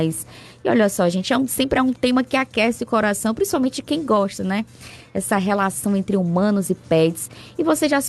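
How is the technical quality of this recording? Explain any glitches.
The recording has a recurring timing fault: the playback tempo is unsteady throughout, with small hiccups from start to finish.

Clock drift between sender and receiver runs through the whole clip. The sending side's audio clock runs roughly 4 percent fast, so the receiver's jitter buffer keeps overfilling. The sound is not broken up, but its pacing never quite settles.

Repeated timing corrections occur from 0.22 s to 7.93 s as the receiver trims short slices to absorb material arriving at 104 percent speed. All the cuts go the same way but are spaced irregularly, heard, if at all, as slight skips or tiny lurches in tempo. The audio also passed through an Opus call path, with the top end stopping near 12 kHz.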